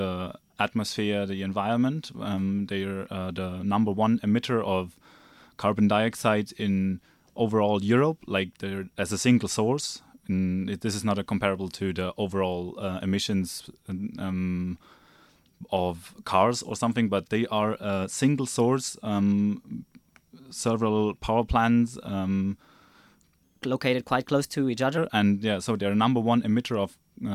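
From 23.43 to 24.98 s a section at the wrong speed plays 1.14 times too fast, likely from a clock mismatch, so the sound rises about two semitones and hurries. On a spectrogram, harmonics jump upward and spread apart; the waveform looks compressed in time.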